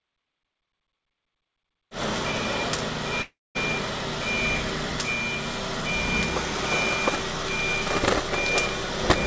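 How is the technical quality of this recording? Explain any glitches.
The recording has one glitch, a call audio freeze, and its spectrum stops sharply at 8 kHz, as expected for a wideband call codec.

From 3.22 to 3.57 s, the last sound is held as a short fading buzz, followed by about 230 ms of silence. The likely cause is delayed packets draining the jitter buffer. Playback then resumes where it stopped, with nothing lost but everything after it shifted 330 ms later. A waveform shows a decaying tail into a flat gap, and a spectrogram shows smeared horizontal streaks, then blank.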